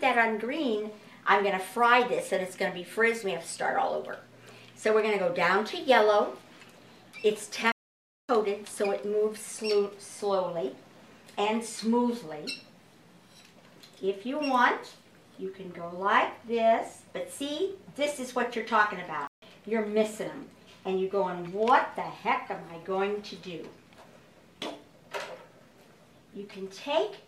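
At 7.72 s the audio drops out for about 0.57 s, until 8.29 s. At 19.27 s it cuts out again, for 0.15 s. Both are playback stalls. The player likely ran short of data or was blocked, so the output fell silent mid-flow.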